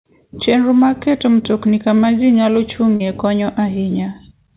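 At 2.96 s, just after "mtokni kama ji nyalo", there is a short concealed packet loss lasting until about 3.02 s. Roughly 40 ms of audio failed to arrive in time, and the receiver synthesised about 38 ms to cover it by extending the preceding sound before crossfading back into real audio. It is audible as a brief smear or wobble, inside a call band with nothing above 4 kHz that points to G.711 mu-law at 64 kbps.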